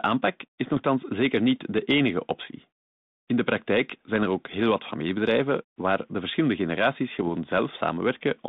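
At 7.19 to 7.24 s, just after "waar de verschillende generaties", bit errors on an ADPCM link cause a brief rough burst with pops and a jumpy level. A small fraction of flipped bits upsets the decoder's step size and predictor, so the damage rings on for some milliseconds.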